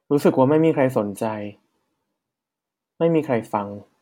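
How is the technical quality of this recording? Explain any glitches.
No glitches; technically sound recording.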